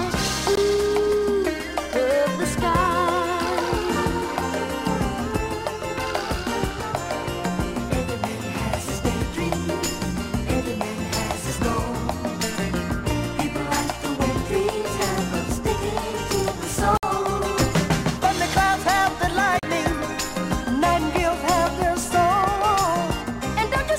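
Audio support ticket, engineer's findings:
Three short silent holes, with the sound picking up further along as if it kept playing underneath: 0.55 s (about 19 ms gone), 16.97 to 17.03 s (about 56 ms), 19.59 to 19.63 s (about 37 ms). Likely a Bluetooth dropout on the headphone link. Late packets got discarded and the output went quiet until fresh ones landed. Gap lengths fit roughly one, three and two lost packets.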